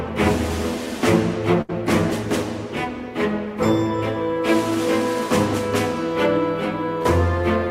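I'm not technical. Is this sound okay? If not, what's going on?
No, there are two dropouts where parts of the sound never arrived in time.

At about 1.61 to 1.71 s there is a burst of packet loss: several chunks of the signal in a row went missing on their way to the player, about 80 ms in all. The receiver covered the hole by stretching out the last sound it had for around 72 ms and letting it fade, so you hear a brief held tone or hiss. The sound then jumps ahead, and the missing stretch is simply gone.

At about 7.03 to 7.07 s there is a short concealed packet loss, where roughly 20 ms arrived too late to be used. The player patched it by continuing the preceding sound for about 24 ms and then blending back into the real audio. Because the patch is so short, it comes across as a quick smear or small wobble.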